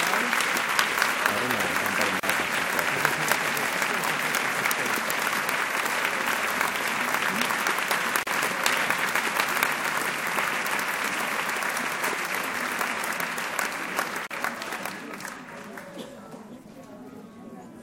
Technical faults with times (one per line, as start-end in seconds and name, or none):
2.20-2.23 gap at a join of encoded pieces
8.23-8.27 gap at a join of encoded pieces
14.27-14.31 gap at a join of encoded pieces